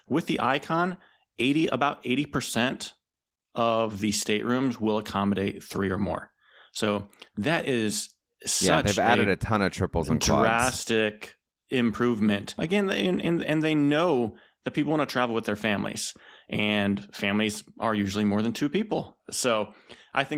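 No technical faults are audible.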